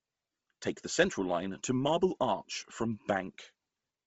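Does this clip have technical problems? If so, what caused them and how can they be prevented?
Yes. Heavy Bluetooth LC3 compression runs throughout the speech. The upper band sounds breathy and grainy, which fits about 24 kbps with 7.5 ms frames. Noise likely replaces discarded detail. Prevent it with a higher LC3 bitrate or a wired connection.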